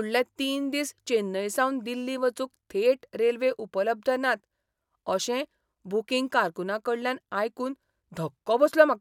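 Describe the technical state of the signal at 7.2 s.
At 7.2 s the speech signal is intact, with no audible fault at that point.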